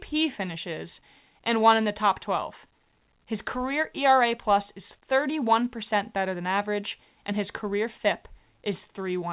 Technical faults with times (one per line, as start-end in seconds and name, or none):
none